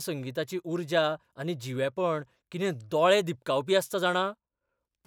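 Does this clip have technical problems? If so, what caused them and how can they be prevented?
No, there are no technical problems to report in this speech recording. Nothing in it calls for a cause or a preventive step.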